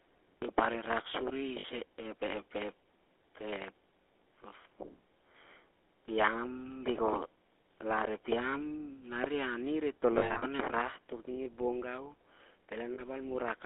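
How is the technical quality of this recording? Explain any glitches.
The recording is clearly limited by phone-network coding and has three short dropouts. GSM full-rate codec, throughout: the codec rebuilds the sound from a vocal-tract model and sparse pulses, consistent with 13 kbps full rate, within a 300 Hz to 3.5 kHz band, leaving a plainly audible buzzy, gravelly roughness. Lost GSM frames at 1.60 s, 10.18–10.44 s and 12.94–13.02 s: missing frames were patched by repeating the last good one. This gives brief rough, metallic ringing, 40 ms each at 1.60 s and 12.94 s, and scattered patches totalling 180 ms across 240 ms around 10.2 s, the longest roughly 70 ms.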